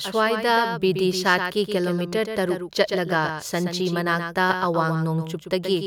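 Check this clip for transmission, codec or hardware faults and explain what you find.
One fault runs through the whole recording: a doubled audio track. The speech is heard twice. A second copy trails the first by roughly 150 ms and sits about 10 dB lower. It carries the full frequency range. It has no decay and no room colour, so it sounds unlike an echo. The likely cause is a second capture of the same signal through a slower path, or an edit that left two copies out of step. The result is a slapback-like smear on every syllable.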